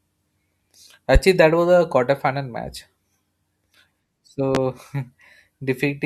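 A loud pop lands at 1.15–1.19 s and again at 4.55–4.58 s, each a single thump far above the speech, likely a voltage spike; unlike a dropout, the speech continues underneath.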